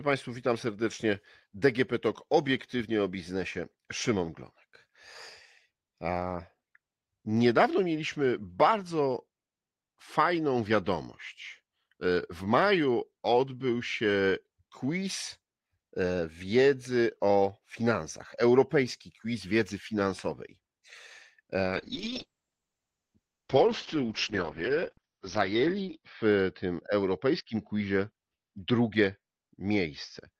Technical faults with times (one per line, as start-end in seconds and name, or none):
21.64-30.40 call bitrate drop